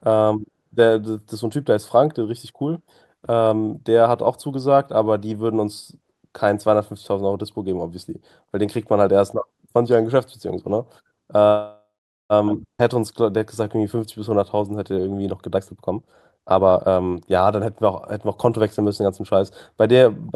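At 11.47 s the speech halts in a call audio freeze lasting until 12.33 s. The last sound is stretched into a fading buzz or hiss, then about 0.44 s of silence. A spectrogram shows smeared horizontal bands decaying to a blank column. The likely cause is packets held up in transit until the jitter buffer ran dry. Nothing is lost; the speech resumes where it stopped.

From 12.78 to 12.82 s comes a skip ahead. Around 0.4 s of speech is dropped and the two sides are butted together almost directly. The waveform shows an abrupt splice with a tiny fill and no matching gap, and a spectrogram shows harmonics jumping discontinuously.

From 12.84 to 15.23 s a jitter buffer slow-down plays speech at 92% speed, adding 208 ms by repeating pitch periods. Pitch stays put while sounds drag. A spectrogram shows stretched formants and periodic, near-identical repeated cycles in the waveform.

Jitter buffer speed-up follows from 15.55 to 17.61 s at 130%, cutting roughly 0.7 s, so speech sounds noticeably hurried at unchanged pitch. 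A milder pass from 18.28 to 19.35 s runs at 105%, removing only a little. A spectrogram shows compressed syllables with pitch bands unshifted.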